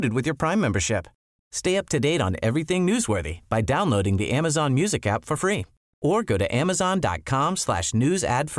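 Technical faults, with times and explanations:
No technical faults can be heard anywhere in this speech recording. There is nothing to time or explain.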